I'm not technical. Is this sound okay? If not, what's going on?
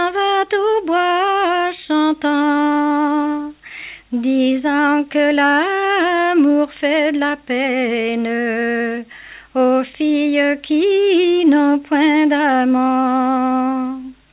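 Yes, it's fine: there's nothing wrong to hear here, just the usual narrow, phone-call quality you'd expect from audio sent over a call line, where everything above about 4 kHz is left out.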